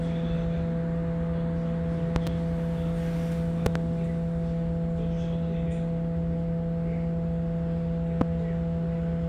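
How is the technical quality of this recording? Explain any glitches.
The recording is marred by three loud pops. At 2.16 to 2.29 s and again at 3.66 to 3.78 s there is a double pop, and at 8.21 to 8.24 s a single one, each peaking about 20 dB above the surrounding sound. The likely cause is a voltage transient, such as a plug, switch contact, static discharge or driver glitch, added to the signal and shaped by the following circuitry into sharp thumps that sit on top of the audio, which continues underneath.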